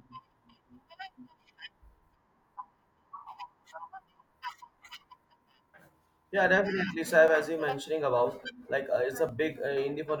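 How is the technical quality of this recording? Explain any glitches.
Two brief glitches break the flow of the speech, at 7.28 s and 9.29 s. Each is a sudden jump where the sound skips forward with no gap of silence, as if a sliver of the speech had been snipped out and the ends butted together. The likely cause is a dropped buffer (overrun): the recording software fell behind, the hardware overwrote a block of samples before it was collected, and roughly 10 ms of audio vanished each time.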